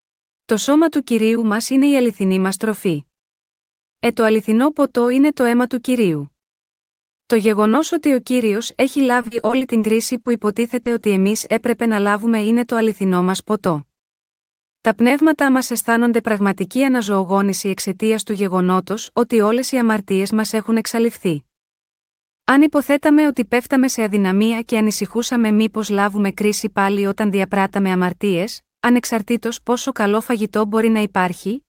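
Choppy, robotic speech runs from 9.21 to 9.85 s, right after "ότι ο κύριο έχει". The sound turns stuttering, with small pieces dropping out. This is repeated packet loss. Six separate gaps, the longest 40 ms and 160 ms in total, left about a quarter of that stretch missing. Each hole was bridged by extending the previous sound, and the next loss arrived before the audio could settle, so the patches pile up into that mechanical texture.

Three brief smears follow: at 10.21 to 10.27 s, at 10.83 to 10.87 s, and at 11.01 to 11.05 s, the last just before "εμεί έπρεπε να λάβουμε". Each is short concealed packet loss, 40 ms for the first and 20 ms for the other two. The receiver filled each hole by continuing the last sound and then blended back into the real signal, which leaves a momentary wobble rather than a clean gap.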